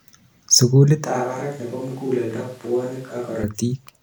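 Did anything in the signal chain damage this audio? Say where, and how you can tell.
Yes. From 1.05 s to 3.43 s the speech suddenly turns roomy and hollow, with less bass, a drop of about 10 dB and background noise sitting only around 25 dB below the speech. At 3.43 s it snaps back just as abruptly. This points to a switch to a distant microphone at the capture stage: the close microphone's feed likely dropped out and a farther pickup, such as a camera microphone, covered that span, hearing more of the room.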